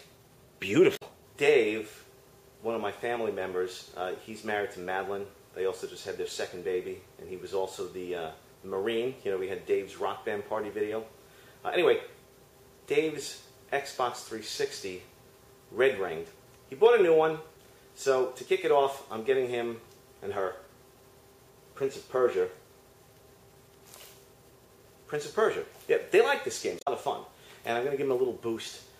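At 0.93 to 1.03 s and again at 26.79 to 26.88 s, each lasting under a tenth of a second, the audio breaks into a short chirp or squawk caused by damaged data in a compressed stream. Corrupted bytes left the decoder misreading frames until it regained sync. On a spectrogram each event is a narrow vertical smear of broadband or oddly banded energy unrelated to the surrounding sound; the waveform shows a brief burst with an abrupt edge.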